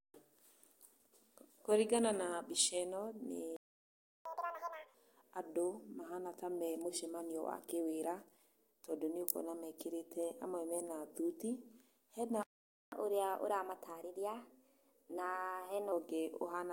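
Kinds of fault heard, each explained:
Playback stall: at 3.56 s and again at 12.43 s the speech cuts out into silence, for about 0.69 s and then about 0.49 s. The likely cause is the player running short of data or its output thread being held up until it could resume.
Catch-up at higher speed: from 4.25 s to 4.94 s the speech runs at double speed, pitched up by nearly an octave. From 12.92 s to 15.92 s it runs 1.1 times fast, a semitone or two higher. Both times the player is resampling its backlog to recover lost time.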